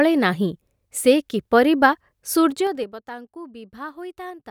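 A speech clip with zipper noise from 2.46 to 2.97 s: the level falls by about 20 dB in 3 dB steps, roughly ten per second, each jump clicking. A waveform shows a staircase envelope, and a spectrogram shows faint vertical broadband lines at each step.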